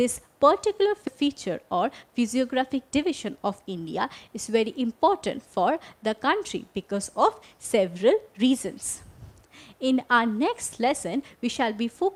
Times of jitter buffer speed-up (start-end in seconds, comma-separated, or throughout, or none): 3.06-4.29